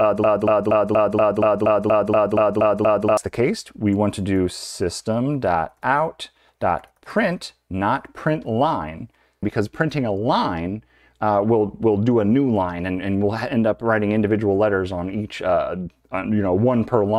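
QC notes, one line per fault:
0.00–3.17 s: broken-record loop, already under way when the clip opens. A 0.24 s fragment repeats exactly, back to back, twelve times, likely because the player or stream stalled and kept resending its last held piece. The audio due in that span is lost.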